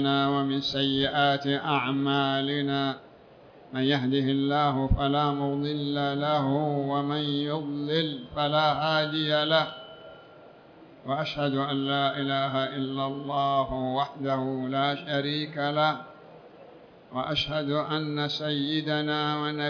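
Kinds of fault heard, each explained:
No fault of any kind can be heard here.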